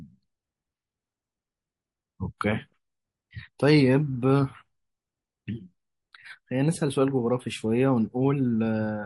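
From the start and throughout, the speech sounds watery and swirly, with plainly audible metallic chirps on sibilants. This is likely MP3 compression at a bitrate around 48 kbps, where too few bits force the encoder to drop high frequencies and let weak components flicker from frame to frame.

At 2.38 to 2.41 s, a brief hiss leads into a sharp onset and softens its edge. This pre-echo spreads about 30 ms ahead of the attack and sits about 18 dB above the quiet moment it fills. The transform spread its quantisation noise across a long block, which fits a 48 ms window, and never switched to short blocks to confine that noise to the attack.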